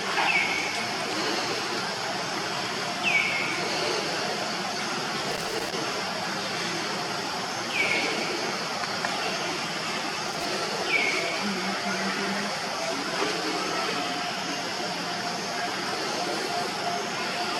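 Two short bursts of loose connector crackle break up the audio, from 5.31 to 5.73 s and again from 10.28 to 10.45 s. A worn or dirty contact is intermittently making and breaking, chopping the signal and producing irregular scratchy pops each time the connection shifts.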